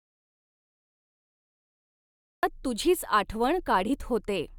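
From the very start until 2.43 s the clip is dead silent, with no room tone at all, before speech cuts in mid-flow. This is an audio dropout to silence, likely from the input being lost while the recorder kept writing zeros, so that stretch of speech is gone.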